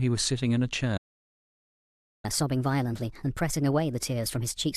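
At 0.97 s the speech cuts off mid-flow and the output stays silent until 2.25 s, a gap of about 1.26 s. This is a playback stall, most likely from the player's buffer running dry or its thread being blocked, so nothing reached the output until it recovered. On a waveform the trace drops abruptly to a flat line for that span, and a spectrogram shows a clean vertical blank across all frequencies.

From 2.25 s to the end of the clip the speech resumes noticeably faster and higher: catch-up at higher speed. The player works through its backlog by resampling at 1.25 times normal speed, and because speed and pitch move together, everything sits about four semitones sharp. On a spectrogram the harmonics and formant bands are shifted upward and syllables appear compressed in time. The waveform shows tighter, more closely packed cycles than before the gap.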